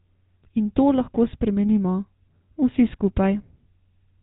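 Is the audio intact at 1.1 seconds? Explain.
No. GSM full-rate codec damage runs through the whole speech clip, including 1.1 s. Regularly spaced pulses, keeping only every third excitation sample, drive a vocal-tract model, cutting everything above 4 kHz and leaving a plainly buzzy, gravelly roughness that fits a 13 kbps GSM coder.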